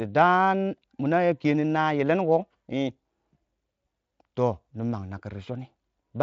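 Speech with no audible technical fault; it comes through a Speex path at what sounds like a high quality setting, with nothing above about 7.7 kHz.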